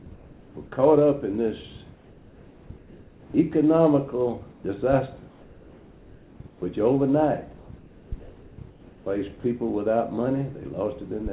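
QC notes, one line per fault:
0.14–0.56 s, 1.94–3.34 s, 4.50–4.64 s, 5.28–6.62 s, 7.58–9.06 s: comfort noise in place of the background. The sender likely halted transmission during pauses, and the receiver filled them with synthetic noise. The real background, about 26–28 dB below the loud parts, becomes a flat, featureless hiss, about 3 dB quieter in the first and third gaps.
3.32–3.34 s: onset clipped by the voice detector. The detector likely reacted late as sound resumed, so the first 20 ms was never sent and comfort noise played there instead. The sound therefore jumps in abruptly without its soft start.
9.40–9.44 s: sound dropped by the voice detector. The detector likely mistook quiet sound for background and briefly stopped sending, so 40 ms was replaced by steady noise and about 20 ms of real sound vanished, leaving a short hole before it returns.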